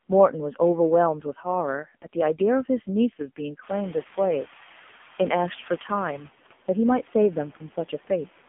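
From start to finish the speech passes through an AMR narrowband mobile codec, confined to roughly 200 Hz to 3.5 kHz with nothing above 3.6 kHz. Heavy coding damage gives a buzzy, synthetic tone that fits a low bitrate near 5.9 kbps, and the room noise rising around 3.5 s swirls and warbles.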